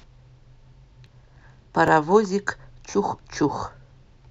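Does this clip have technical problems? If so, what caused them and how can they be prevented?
Yes. You get three quick jumps in the speech, at 1.06 s, 1.88 s and 3.53 s, where the sound jumps forward without any gap. Each one loses only a few milliseconds, and the likely cause is a dropped buffer (overrun): the recording software didn't collect its samples in time, the hardware wrote over them, and the audio on either side got butted together. Giving the capture thread higher priority or using a larger buffer should stop it.

There's also a Bluetooth stutter from 2.91 s to 2.94 s. It's a short burst of repetition, about 28 ms of sound that gets replaced by the receiver replaying its last chunk while it waits for late or lost packets. The gap is about the size of a couple of packets, and afterwards the speech picks up further along, as though it had kept playing through. Keeping the headset close with a clear line of sight, and away from busy 2.4 GHz Wi-Fi, should prevent it.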